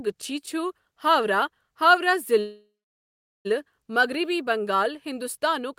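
A speech clip with a call audio freeze: packets were likely held up in transit and the jitter buffer ran dry, so from 2.39 to 3.47 s the last sound is stretched into a fading buzz, then about 0.76 s of silence, before speech resumes with nothing lost but roughly 1.06 s later.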